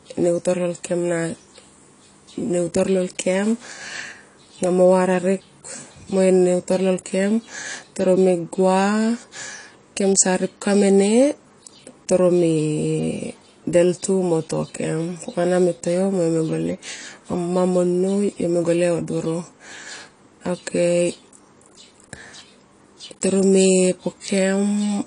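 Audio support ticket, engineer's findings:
AAC compression, throughout: dull, smeared speech with plainly audible codec damage and nothing above 10.2 kHz. Likely AAC-LC at a low bitrate, fitting roughly 32 kbps. Unlike a simple low-pass filter, it adds a warbling, fizzy texture on sustained sounds and sibilants.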